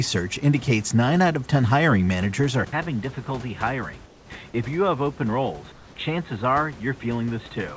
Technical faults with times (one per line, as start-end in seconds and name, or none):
2.65-7.76 input switched to a poorer device
4.06-4.30 comfort noise in place of the background
5.72-5.96 comfort noise in place of the background